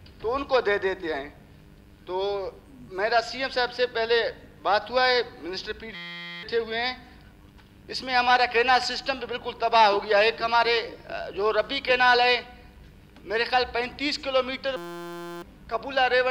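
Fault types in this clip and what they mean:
System hang loop: the machine or driver stalled while the audio hardware kept replaying the same tiny stretch of its ring buffer. Here that stretch is only 5.8 ms, which fits a 256-sample buffer, so you hear a steady buzz at about 172 Hz instead of a stutter. It happens twice, from 5.95 to 6.43 s and from 14.77 to 15.42 s, and roughly half a second and then 0.7 s of real audio are lost.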